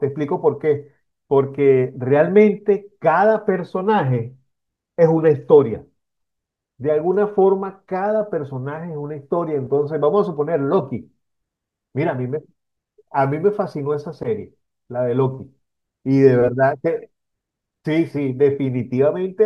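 Speech recording, no technical faults heard anywhere in the clip.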